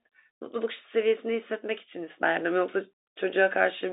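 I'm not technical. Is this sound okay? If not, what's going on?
Yes, it's fine, just ordinary telephone-line speech.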